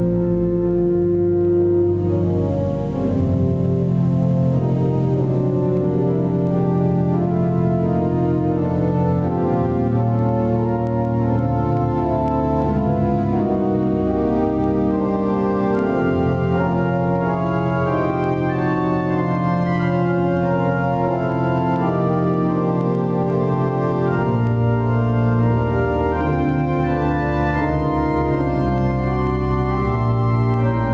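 The audio pumps throughout, a case of gain pumping. The gain swings by around 10 dB. The result is squashed. The likely cause is input gain set far too high, with a fast limiter pulling it down. The call's microphone processing cuts everything above 8 kHz.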